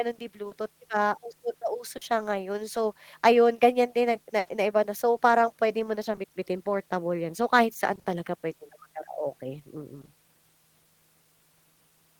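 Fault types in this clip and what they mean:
Short concealed packet loss: A small piece of the stream arrived too late to decode, and the receiver filled the hole by extending the preceding sound, pitched if voiced and as shaped noise if not, before crossfading back. It appears at 0.49 s (20 ms), at 1.97 s (40 ms), and as two back-to-back 20 ms patches at 10.01 s and 10.05 s. Each is a brief smear or wobble, and a short consonant there may drop out.
Scattered short gaps: Between 4.39 s and 6.19 s, several isolated packets went missing, roughly four, each patched by continuing the last sound. The concealed material adds up to about a tenth of a second, with the longest hole around 70 ms, so only a small share of the stretch is synthetic. The sound stays largely intelligible through this stretch, broken by a few separate hiccups and smears.
Repeated packet loss (robotic sound): From 7.95 s to 8.07 s, three losses of up to 20 ms each follow in quick succession. 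That leaves 60 ms concealed, half of this short span, so the patching repeats before the real signal can settle. The continued pitch strings together into a choppy texture with fragments missing, rather than a single clean repair.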